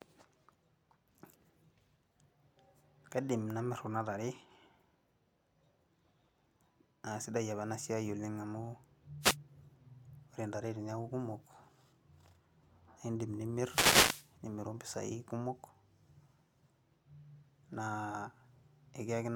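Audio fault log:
9.21–9.37 s and 13.55–14.34 s, wireless microphone noise hit: as the analogue FM link fades through cancelling reflections, receiver hiss swells over the speech, lasting 0.8 s in the longer hit, heard as a short swish or burst of static. A spectrogram shows broadband noise patches; the waveform shows thickened bursts.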